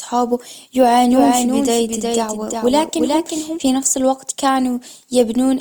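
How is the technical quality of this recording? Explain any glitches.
The technical quality is held back by two problems: compression damage that runs the whole way through, and a stretch where the sound is doubled.

The entire clip has a grainy, rough texture with a noisy edge on tonal parts, though the top end stays open to about 20 kHz. That points to Opus compression in its CELT music mode, likely at a low bitrate around 24 kbps, where starved bands get filled with folded or noise content.

From 1.10 s to 3.60 s there's a doubled audio track. A second copy trails a bit under half a second behind, a few dB quieter, with no room colour, and it starts and stops abruptly. It ends just before "في نفس الوقت". The cause is likely a second, slower capture path.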